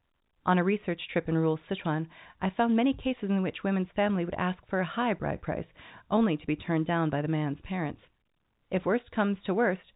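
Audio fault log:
Nothing stood out on listening to this speech, which comes through at telephone bandwidth as G.711 coding would give it.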